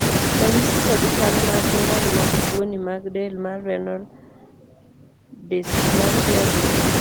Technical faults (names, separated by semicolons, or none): none